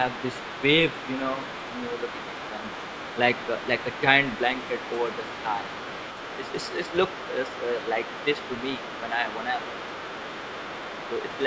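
Speech, with the other side's voice leaking through from about 0.11 s to 11.43 s: a second, quieter voice sits well below the main talker throughout. Unlike room reverberation, it is a separate voice, likely loudspeaker playback the echo canceller did not fully remove.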